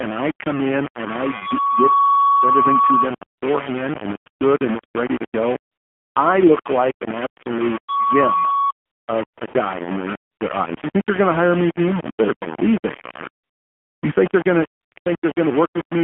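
The speech runs through an AMR narrowband mobile codec from start to finish. The band stops at about 150 Hz below and 3.4 kHz above, so it sounds thin and boxed in. The damage is plainly audible. Vowels turn buzzy and synthetic, as a few pulses per subframe stand in for the real excitation. That degree of coarseness fits the low 7.4 kbps AMR-NB mode.

A grainy distortion also sits on the whole clip, and it moves with the sound. It is harsh and loud, not far below the speech itself. Quiet syllables turn gritty and sputter instead of fading smoothly. The likely cause is low bit depth without dither, with the signal rounded to very few levels. That fits 4-bit rounding. The error tracks the waveform, so it is heard as distortion rather than steady hiss.

AMR comfort noise switches in twelve times, from 3.38 s to 15.36 s. The phone stopped sending speech frames there, and the receiver filled each gap with smooth synthetic noise. 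The longest gaps are 5.72 to 6.16 s and 13.44 to 14.02 s, at 440 and 580 ms. Short ones bracket "in their" at 9.48 s and 10.32 s. A dense run follows "think they're going to", from 14.80 s to 15.36 s. Each change makes the background swap abruptly for an even hush.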